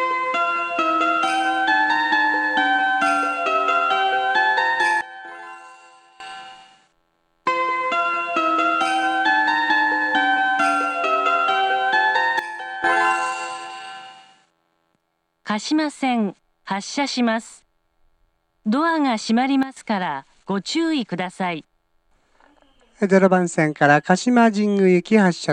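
At 5.01 s the level drops by about 19 dB until 6.20 s, then returns; similar sudden gain jumps of about 12 dB down occur at 12.39 to 12.84 s and 19.63 to 19.77 s. Sound and background fall together, likely from digital gain applied without a ramp.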